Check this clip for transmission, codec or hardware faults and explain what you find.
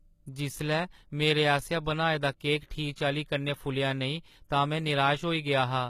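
HE-AAC compression runs throughout the speech clip, plainly audible. Treble is likely rebuilt by band replication from lower bands, fitting roughly 20 kbps, so sibilants sound gritty and lispy.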